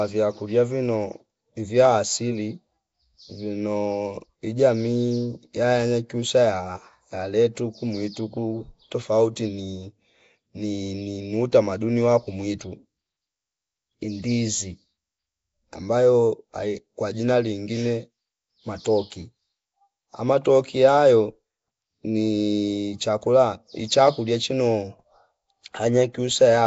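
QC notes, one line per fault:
Throughout, Nellymoser compression: likely a Flash-era coder starving weak bands, which get noise fill, leaving a rough hissy halo, smeared underwater speech, nothing above 7.7 kHz, fitting about 32 kbps.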